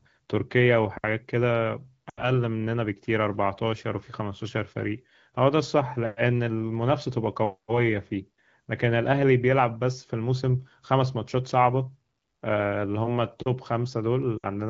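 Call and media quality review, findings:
Brief drop to near silence, 2.09–2.29 s; voice returns weak and rough. Lost AMR speech frames: decoder concealment repeating last good pitch and vocal tract settings at falling gain, about 80 ms of missing audio, consistent with four 20 ms frames.

Shorter drop to near silence, 14.37–14.46 s, about 60 ms gone, pointing to three frames. Same lost AMR speech frames mechanism: radio errors failing frame checksums, wideband decoder fading the concealment quickly. Underlying AMR-WB (HD Voice) coding at 15.85 kbit/s shows only light coding damage.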